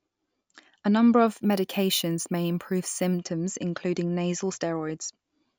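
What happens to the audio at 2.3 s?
Imaging from sample-and-hold upsampling runs from 1.27 to 3.18 s. Samples were repeated from 16 to 48 kHz without smoothing, so mirrored speech sits about 15 dB down at 8 to 16 kHz, heard as a bright metallic fizz.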